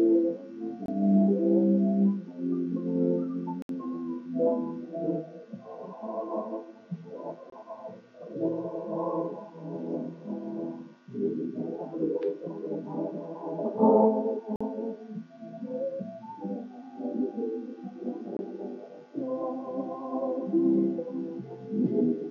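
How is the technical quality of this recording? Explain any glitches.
The recording is marred by five dropouts, each a block of digital silence, most likely where the program failed to fill its output buffer in time and zeros went out instead. They fall at 0.86–0.88 s, 3.62–3.69 s, 7.50–7.52 s, 14.56–14.61 s and 18.37–18.39 s. The 23 ms gaps fit a 1024-sample buffer, the 46 ms gap two buffers, and the 70 ms gap three. With no fade at either edge, each cut starts and stops abruptly, and the longest sounds like a brief hole.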